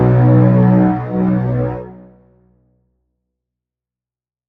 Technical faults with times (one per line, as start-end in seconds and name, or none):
0.00-4.49 noise suppressor applied to music or sounds
1.71-2.85 sound cut by the noise suppressor